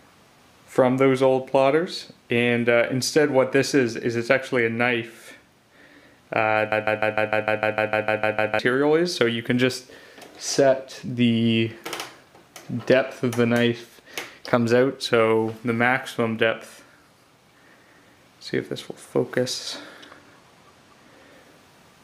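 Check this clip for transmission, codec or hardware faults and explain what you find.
Two faults turn up in this one.

From 6.72 to 8.59 s there's a broken-record loop: a 151 ms fragment plays back to back, twelve times over, and whatever should have been there is gone. The likely cause is a stalled player or stream re-sending the last chunk it held.

Then from 19.54 to 21.32 s there's channel delay with comb filtering. One channel lags by a tiny amount, consistent with a single-sample offset of about 0.02 ms, and summing to mono cancels content with the first notch up around 20 kHz. It's subtle, mostly a slight dulling of the very top end.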